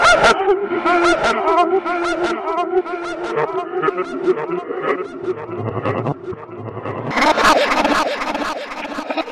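A recording of sounds that, from 7.11 s to the end at 9.32 s, races at double speed and jumps an octave up. This is audio read two samples at a time: the reader treats each pair of samples as one frame, as if the data had two channels or wider samples.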